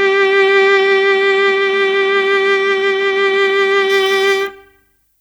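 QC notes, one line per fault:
3.90–5.21 s, pre-emphasis left on: thin, sibilant music with treble climbing steadily to about 11 dB up at 10 kHz, fitting an uncorrected 50 µs FM curve rather than a flat shelf.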